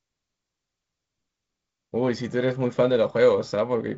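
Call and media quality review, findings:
No findings for the call and media quality review.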